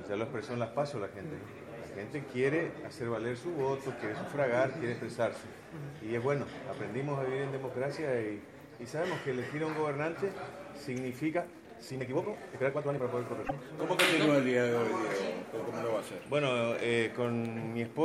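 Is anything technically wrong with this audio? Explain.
Yes, there are two faults. From 11.28 to 13.04 s the sound suddenly becomes choppy and rushed, racing along at about 1.8 times its normal pace while the pitch stays put. This is a time-stretched section. It was likely produced by software squeezing the passage to fit a shorter length, holding the pitch steady by discarding short slices of audio and butting the remainder together. That is what gives it the clipped, hurried texture.

Shortly after, from 13.40 to 13.51 s, a brief glitch cuts in. This comes from damaged data in a compressed stream. Some of the encoded bytes at that point are corrupt, so the decoder misreads or throws out those frames, loses its place, and hunts for the next valid frame header. The glitch is the audible trace of that resynchronisation.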